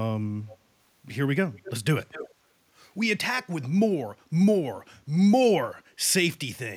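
Echo leak in this speech at 0.48–0.57, 1.56–1.72, 2.0–2.34 and 3.42–3.65 s: a faint copy trailing about 250 ms behind (nearer 290 ms first), clearest at 2.0 s, barely audible at 3.42 s. Likely a loudspeaker echo the far end's canceller missed.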